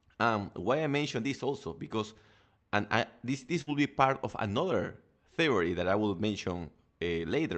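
At 3.61 to 3.70 s, right after "and I this this", there's a burst of packet loss. The receiver stretches and fades the last sound for about 53 ms, then jumps to "be part of another", so roughly 60 ms of speech never arrives.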